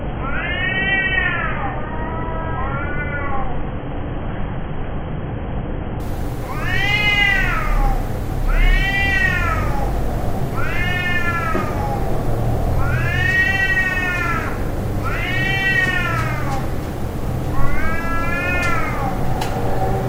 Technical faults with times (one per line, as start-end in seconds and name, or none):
0.00-6.00 adaptive stream starting at a low bitrate